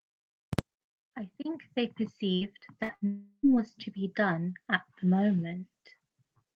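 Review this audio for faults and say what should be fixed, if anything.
At 2.35–2.44, 2.83–2.92 and 2.95–3.04 s, brief continued sounds fade then jump ahead, skipping about 60 ms each: bursts of packet loss concealed by extrapolation.

From 3.07 to 3.46 s a fading continuation of the last sound gives way to silence before the speech resumes further on, likely a long network dropout losing about 360 ms.

Fixing both calls for a larger adaptive jitter buffer with forward error correction or retransmission on a more stable network link.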